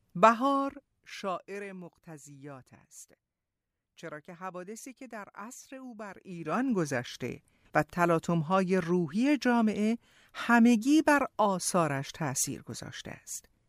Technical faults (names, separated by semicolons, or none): zipper noise